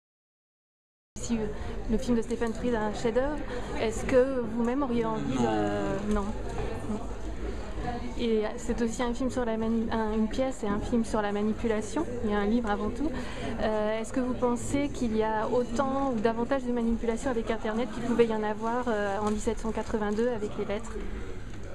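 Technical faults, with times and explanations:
0.00–1.16 s, cut-off start: the clip opens on digital silence for its first 1.16 s, and the sound then appears abruptly at 1.16 s already under way, in the middle of an event rather than at its beginning. Capture or streaming began late, so whatever led up to that moment was never recorded. With no natural attack or fade-in to ease it in, the entry is an instant jump from nothing to full sound.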